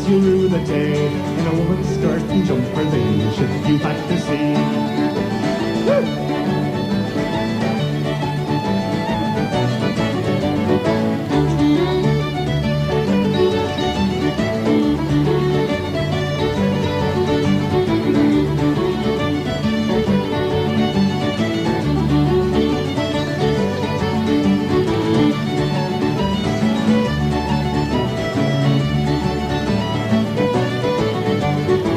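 No technical faults can be heard anywhere in the audio, and the signal holds steady throughout.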